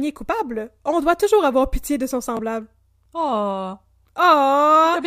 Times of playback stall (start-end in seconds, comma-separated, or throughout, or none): none